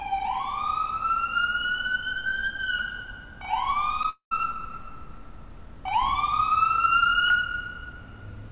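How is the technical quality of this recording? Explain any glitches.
Two glitches occur close together just after the four-second mark, over a call-style path whose narrow band leaves nothing above 4 kHz.

Short concealed packet loss at 4.03 s: about 10 ms of audio reached the decoder too late, so the receiver bridged the gap by extending the preceding sound and then merging back into the real signal. It is heard as a tiny smear or wobble.

Long network dropout from 4.09 to 4.32 s: the preceding sound continues artificially as a fading buzz or hiss, then falls to silence for about 120 ms before the audio resumes. The likely cause is a stretch where no packets arrived, so about 220 ms of the original sound is missing.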